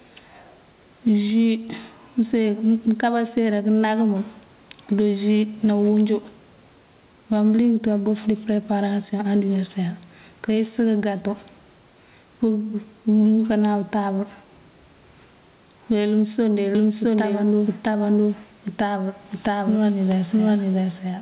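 From the start and through the whole speech clip there is gain pumping: the level keeps swinging by around 10 dB. The likely cause is gain set far too high feeding a fast limiter or compressor that clamps down on every peak. Loud and quiet passages sound squashed together.

At 16.75 s a doubled audio track begins and runs to the end. A second full-band copy of the speech, at roughly the same level, trails the original by about 0.7 s, so every phrase is heard again a moment later on top of what follows. The likely cause is the same audio arriving twice, through a slower second capture path or two out-of-step copies in an edit. What separates it from room echo is that the copy has no decay or reverberant colour, and it switches in abruptly rather than building up. Like the original, it is confined to the narrow band below 4 kHz of the call path.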